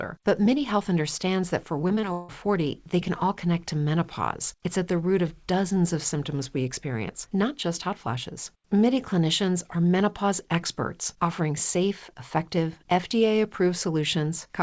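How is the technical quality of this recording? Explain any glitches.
The recording has one clear glitch: a burst of repeated packet loss (robotic sound) from 1.88 to 2.30 s, just after "understands that for". The call link lost or delayed packets four times in quick succession. Each hole was patched by stretching the preceding sound, about 206 ms filled in total, while about 220 ms of the original never arrived, the longest single gap being 159 ms. With roughly half the stretch synthesised, the speech turns choppy, with fragments missing. Across the whole clip, the call path's bandwidth stops at 8 kHz, which fits a wideband codec such as G.722.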